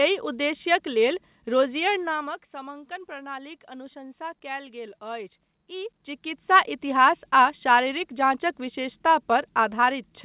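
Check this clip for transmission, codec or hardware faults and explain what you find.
No transmission faults detected.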